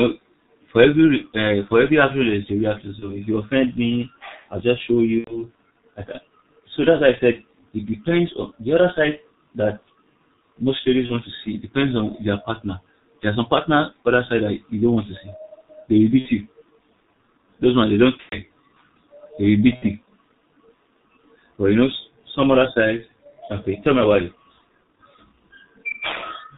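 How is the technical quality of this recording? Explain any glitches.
The speech is heavily degraded throughout, with six brief dropouts where it turns buzzy or noisy and fades.

G.723.1 codec: the whole recording is muffled and hoarse, with nothing above 4 kHz and smeared consonants. That fits this low-rate telephony codec at around 6.3 kbit/s, which models the voice in 30 ms frames and tracks changes too slowly.

VoIP packet loss concealed by the speech codec: the voice stretches into a buzzy tone or coloured noise that fades at 2.99–3.18 s, 5.18–5.48 s, 11.06–11.20 s (after "most ladies", before "to see"), 16.19–16.29 s (after "to see they will"), 18.23–18.37 s (after "ones they don't") and 19.76–19.87 s. The decoder is filling each gap by repeating its last pitch and filter at falling gain. The longest gaps point to about 90 ms of missing audio, and the sound stays weak briefly after each one.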